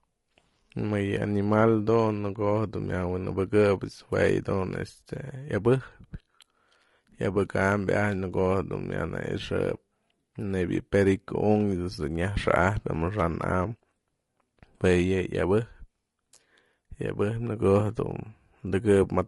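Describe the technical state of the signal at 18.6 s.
At 18.6 s the speech sounds rough and grainy, with a noisy haze between the pitch harmonics, as it does throughout the clip. The likely cause is low-delay AAC compression: short frames resolve harmonics poorly, which fits AAC-ELD at about 32 kbps.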